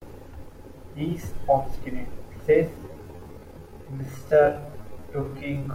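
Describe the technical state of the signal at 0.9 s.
At 0.9 s the speech signal is intact, with no audible fault at that moment.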